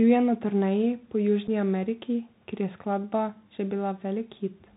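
The speech runs through a Bluetooth CVSD headset codec at 64 kbps, so nothing above 4 kHz survives, sibilants turn scratchy, and a granular hiss sits underneath. From 1.47 to 1.49 s, unconcealed Bluetooth headset packet loss drops about 7.5 ms, likely a single packet, leaving an abrupt hole before the speech returns briefly quieter.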